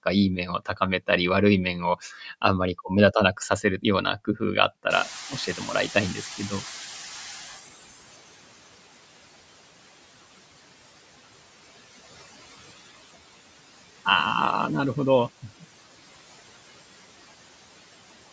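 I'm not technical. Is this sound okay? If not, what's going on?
No, not quite. Throughout, there are noise suppressor artifacts: the background noise dips between phrases and swells under speech.

There's also speech cut by the noise suppressor, from 0.46 to 0.81 s and again from 5.3 to 5.68 s. The filter mistook bits of speech for noise, so a few sounds come out faint or swallowed.

Around 5 s the room gets noticeably noisier, and you can hear the noise suppressor catching up. From 4.9 to 7.75 s that new noise comes through with less reduction at first, then fades over about three seconds as the filter adjusts.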